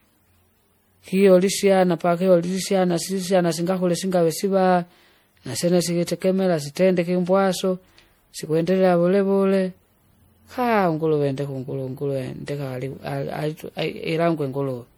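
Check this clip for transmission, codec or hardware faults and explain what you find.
There is one fault, present for the whole clip. It sounds like generation loss. The speech is swirly, hollow and smeared, with blurred attacks and nothing above 20.8 kHz. Likely cause: about four successive MP3 encodes, each re-quantising on a shifted frame grid, compounding noise at a rate that points to 64 kbit/s.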